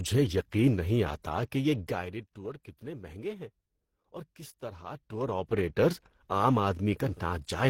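Speech carrying two layers of codec artefacts heard together throughout, with nothing above 16.3 kHz, likely from transcoding between lossy codecs, a low-rate Opus pass re-encoded as HE-AAC.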